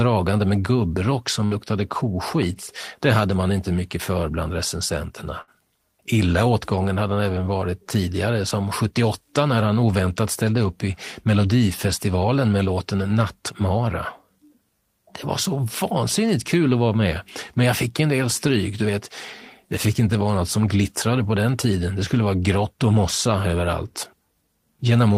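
At 1.45 to 1.54 s, just after "med gubbrock", and again at 5.41 to 5.50 s, after "mycket för bland recensenterna", the speech has a burst of packet loss. Each time about 60 ms of audio never arrived, and the receiver stretched the last sound into a short fading buzz or hiss before jumping ahead. On a spectrogram, flat smeared harmonics dim away, then the speech resumes with an abrupt change; the waveform shows a tapering, repetitive stretch.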